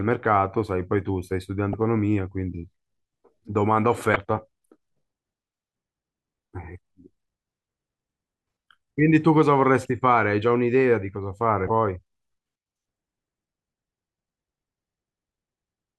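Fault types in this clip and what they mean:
Damaged data in a compressed stream: 30 ms blips at 1.71, 4.13 and 11.67 s, where corrupted frames make the decoder lose sync.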